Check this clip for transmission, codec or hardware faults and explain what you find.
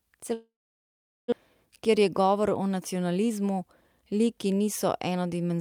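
Two transmission problems here, both on the network side. From 0.33 to 1.34 s the sound tails off into a fading buzz and then sits silent for about 0.8 s, with roughly 0.6 s of material gone; that's likely a long network dropout. Then there's jitter buffer speed-up from 1.66 to 3.62 s and again from 4.01 to 5.59 s, where the speech runs about 9% fast at unchanged pitch. The receiver is clipping out tiny pitch-period slices to shed backlog, around 0.2 s and 0.15 s respectively, so it sounds a bit rushed.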